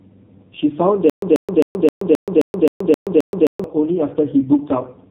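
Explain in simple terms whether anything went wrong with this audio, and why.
Two things went wrong. The whole clip has been squeezed through the AMR narrowband mobile codec, the speech codec used in older phone networks. It keeps only sound below 3.8 kHz, so the speech is dull and boxy. It was run at a very low quality setting, and the damage is heavy. Voices come out buzzy and synthetic, because the codec rebuilds speech from a rough model of the throat and mouth instead of keeping the real sound.

The second problem is a stutter with silent gaps, from 1.10 to 3.64 s. A short burst of about 137 ms plays, then about 126 ms of dead silence follows. The same burst returns every 264 ms, nine times in all. The likely cause is a player or stream that stalled and kept replaying its last piece while waiting. Whatever should have been heard in those seconds is gone.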